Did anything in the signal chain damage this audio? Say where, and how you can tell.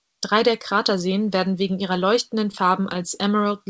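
Yes, at the network stage. Scattered short gaps fall between 2.52 and 3.17 s, after "werden wegen ihrer leuchtenden". About four brief hiccups follow. Lost packets were patched by extending the preceding sound.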